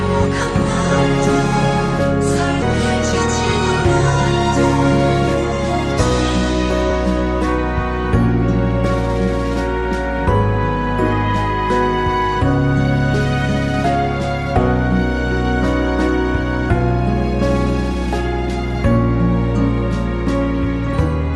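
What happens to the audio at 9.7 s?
Nothing goes wrong at 9.7 s: the audio carries straight through that moment with no dropout, glitch or distortion, only the steady character of the call codec path, whose band tops out around 12 kHz.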